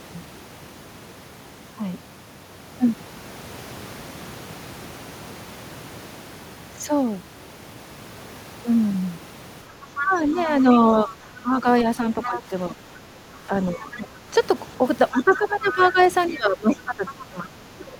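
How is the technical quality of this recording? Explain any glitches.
The recording has clear echo-control problems in its second half, with the far-end talker bleeding in and the near-end speech being pulled down.

Other side's voice leaking through: scraps of a second voice appear at 9.96 to 10.05 s, 11.08 to 11.14 s and 12.23 to 12.42 s, then a longer stretch from 15.17 to 17.25 s. They sit roughly 10 to 20 dB below the main speech. This is likely residual loudspeaker echo the canceller failed to subtract.

Speech suppressed in double talk: from 10.03 to 14.34 s and again from 15.11 to 17.98 s, the main speech dips unevenly, by about 10 dB and then as much as about 20 dB, for roughly two seconds in each span. Because these dips line up with the leaked voice, the likely cause is the canceller attenuating everything while both sides were talking.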